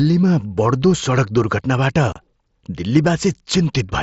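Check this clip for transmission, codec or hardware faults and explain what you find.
One transmission fault stands out: unconcealed Bluetooth headset packet loss at 2.13 to 2.16 s. Several voice packets travelling between the headset and the phone failed to arrive, which fits about four lost mSBC packets. Nothing was done to conceal them, so silence or an idle pattern filled the gap. The result is a hole in the speech of about 30 ms with abrupt edges, where the audio simply cuts out and snaps back. The wideband mSBC codec carrying the link shows only light damage.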